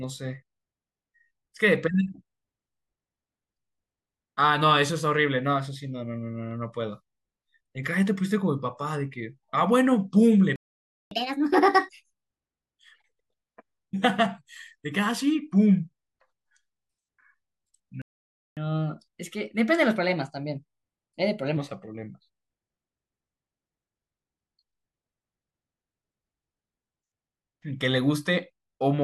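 Speech recording where playback stalls twice, at 10.56–11.11 s and 18.02–18.57 s. Each time the sound cuts out for roughly 0.55 s, likely because the player ran out of buffered data or its thread got blocked. After each gap you get catch-up at higher speed, with the player resampling to burn off the backlog. From 11.11 to 12.22 s it runs at 1.5x, pitched up about seven semitones. From 18.57 to 21.57 s it runs at 1.15x, only about two semitones sharp, before settling back to normal.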